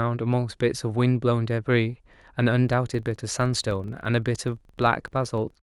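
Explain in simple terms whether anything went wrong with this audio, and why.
Filter restarted on every block, from 2.69 s to the end: a processing filter loses its memory between chunks of audio and starts each one from silence, leaving a small tick every time. These ticks repeat about 23 times per second, which fits 2048-sample blocks, and blur into a buzz that follows the speech's loudness.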